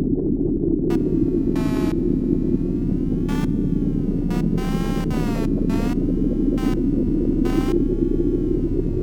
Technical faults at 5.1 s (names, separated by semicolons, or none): computer activity noise